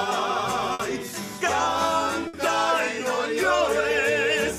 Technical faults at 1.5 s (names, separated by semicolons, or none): none